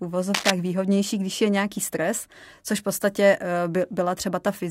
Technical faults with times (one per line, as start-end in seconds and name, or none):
0.34-0.51 cable scratch noise